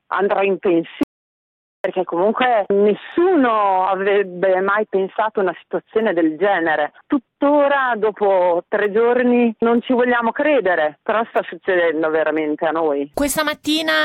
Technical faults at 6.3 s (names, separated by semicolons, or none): none